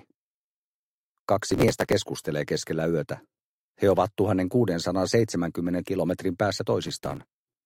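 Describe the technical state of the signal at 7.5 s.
Processor overload crackle runs from 6.83 to 7.56 s, covering 7.5 s. The processor keeps missing deadlines for very short buffers, roughly a millisecond or two each. Dozens are skipped outright, leaving hard-edged gaps heard as a gritty burst of crackle over the sound.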